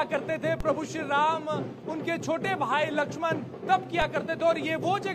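At 0.60 s and again at 4.02 s, a DC step shifts the waveform's zero line by about -20 dBFS, heard as a dull low thump. The waveform's baseline jumps, then curves back as a 20 Hz high-pass drains the offset, while the spectrogram shows a brief low-frequency smear.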